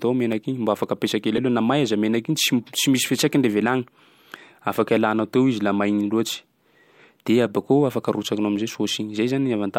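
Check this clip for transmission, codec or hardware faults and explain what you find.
The speech carries two kinds of fault: five isolated clicks and one short disturbance from an MP3 decoding error.

Dropped samples at 0.84, 2.78, 4.54, 7.56 and 8.56 s: each is a single sharp click, likely from a tiny fraction of a millisecond of samples going missing so the waveform jumps. Unlike a reservoir error, nothing audible is skipped or smeared.

Broken MP3 bit reservoir at 1.36 to 1.39 s: a brief disturbance, about one 24 ms frame long, likely because frames were lost and the next frame borrowed bytes belonging to another. It lasts longer than a click.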